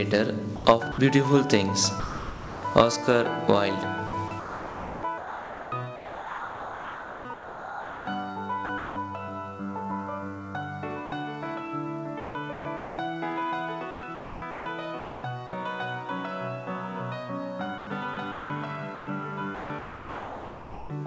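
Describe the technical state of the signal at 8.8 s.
Around 8.66 to 8.96 s the sound gets chopped, likely by the voice detector. About 210 ms drops out and is replaced by comfort noise, so the background briefly turns synthetic.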